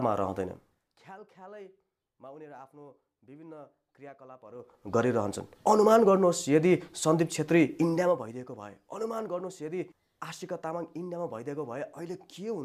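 A level control moving in 2 dB increments with no smoothing causes zipper noise at 0.42 to 1.02 s, where the level falls by roughly 25 dB, and again at 4.46 to 4.97 s, where it rises by a similar amount. Each abrupt jump adds a small click to the waveform, and at about twenty steps a second those clicks merge into a ticking, zipping texture over the sound for as long as each level move lasts.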